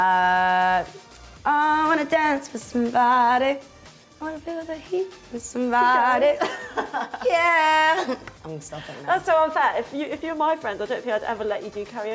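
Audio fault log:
throughout, gain pumping: the level ducks by around 5 dB under every loud sound, so loud and soft parts sit close in level and the audio feels squashed. The likely cause is microphone gain set far too high, with a fast limiter pulling it down on each peak. The waveform shows peaks flattened to a near-constant ceiling; the spectrogram shows nothing above the 8 kHz top of the call processing.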